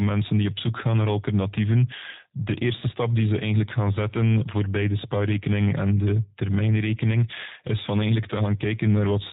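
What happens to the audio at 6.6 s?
At 6.6 s the speech carries G.729 codec damage, present across the whole clip and plainly audible. The speech is rebuilt from a vocal tract filter, a pitch predictor and sparse pulses, which fits an 8 kbit/s stream. Nothing above 4 kHz passes, and the voice takes on a rough, synthetic buzz, unlike a simple band-limit.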